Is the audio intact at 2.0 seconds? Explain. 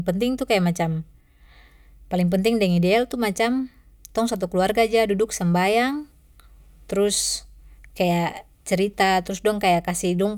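Yes, at 2.0 seconds the speech is intact, with no dropout, click, distortion or other fault audible at that moment.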